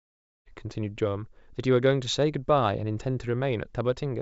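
No technical faults can be heard anywhere here.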